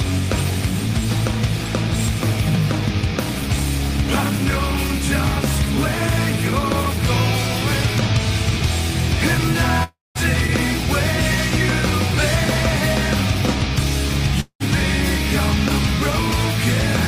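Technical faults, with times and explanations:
9.83–10.18 s, long network dropout: a likely loss of incoming audio left a gap of about 320 ms. The receiver stretched the last sound into a fading buzz for about 315 ms, then about 200 ms of near-silence, and the sound resumes with that stretch missing.
11.34–11.36 s, overlapping chunks: the audio was handled in 6 s chunks, and the next chunk began 20 ms before the previous one ended. That 20 ms plays twice at the join, heard as a brief click or stutter.
14.40–14.63 s, long network dropout: a likely interruption in delivery lost about 200 ms of audio. A decaying hiss fills about 196 ms, thinning to roughly 80 ms of silence, before the sound returns without the lost portion.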